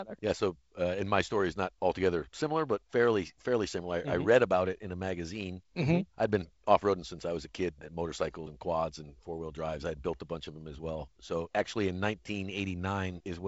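Nothing stood out on listening; the speech sits within a wideband telephone band that stops at about 7.7 kHz.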